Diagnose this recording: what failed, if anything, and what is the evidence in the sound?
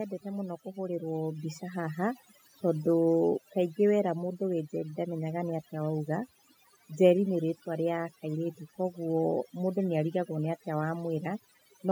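Overdone noise removal runs through the whole speech clip. This failed in call processing. The background drops and breaks up into twinkling specks. The noise suppressor was set too strong. It pushes each frequency band far down or off whenever that band comes close to its noise estimate. The quiet parts of the voice fall under that threshold and vanish with the noise.

Automatic gain rising appears at the start, also in call processing. From 0.22 s to 2.11 s, voice and background swell together by about 8 dB. The rise is gradual, lasting nearly two seconds, not a step. This is the automatic gain control judging the input too quiet. It ramps its gain upward, and it lifts everything in the signal at once, including the residual background.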